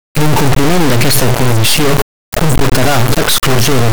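Across the whole clip, integer samples are being read as floating-point values, which fits 32-bit integer data interpreted as 32-bit float. The speech becomes an extremely loud, buzzing square wave slamming between silence and the clipping limit, cutting out to nothing in the quietest moments.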